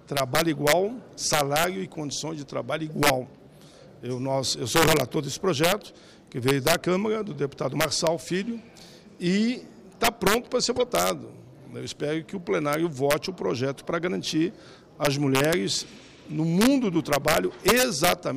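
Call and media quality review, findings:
Integer overflow throughout, on loud peaks. Gain stage driven about 6 dB past full scale, no saturation; a small fraction of samples wrap to opposite polarity. Violent full-range cracks, not the flattened, buzzy tops of ordinary clipping. Probable component: fixed-point mixer or gain without clamping.

Corrupt frame decoded, 10.76 to 10.82 s. A short artefact around -20 dBFS spanning a couple of codec frames. Decoder played damaged bitstream; misread codes put energy at wrong frequencies. Frame-length artefact, unlike the broadband crack of a dropout or splice.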